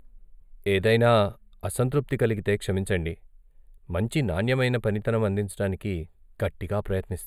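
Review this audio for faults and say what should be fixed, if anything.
The speech has a hollow, phasey top end from start to finish. This is channel delay, heard as comb filtering. One channel arrives a few samples late, roughly a tenth of a millisecond. When the two are folded to mono, their shared content cancels at evenly spaced frequencies. The first deep notch sits somewhere around 5 kHz, which dulls the sibilance and the upper presence. The fix is to realign the channels before summing. To prevent it, check inter-channel timing and mono compatibility at every stage that mixes the two channels together.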